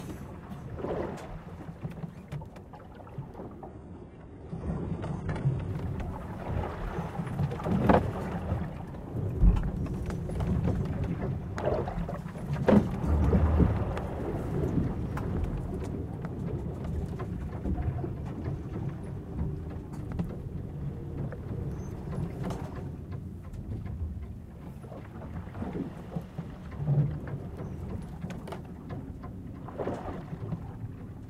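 A clip of everyday sounds in which the adaptive stream dropped to a lower bitrate from 3.68 to 5.68 s, most plausibly when the connection slowed and the player switched to a cheaper encoding. For those two seconds the top end is missing, with nothing above 11.3 kHz, and codec artefacts rise, which fits a very low-rate HE-AAC stream replacing a much fuller AAC one. The quality shifts abruptly at both edges, without any gap.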